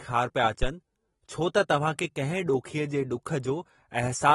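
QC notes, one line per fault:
Throughout: AAC compression, likely the cause of the plainly audible codec damage. Nothing is present above 11.8 kHz, which points to a low AAC-LC bitrate of around 34 kbps. Unlike a plain low-pass filter, the damage also affects content below the cut-off, because quantising against a hearing model leaves some bands coarse or missing.
0.63 to 0.70 s: phantom power thump. A low-frequency thump lasts about 70 ms and decays within roughly 16 ms. A supply switching on or off on a live input sends a voltage step through the coupling capacitors. This differs from a breath plosive, which carries air noise.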